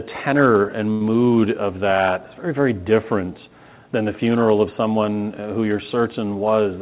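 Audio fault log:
0.92–1.03 s, short stall from a late packet: a packet showed up late, so the jitter buffer stretched the last sound for about 83 ms, then resumed with nothing lost.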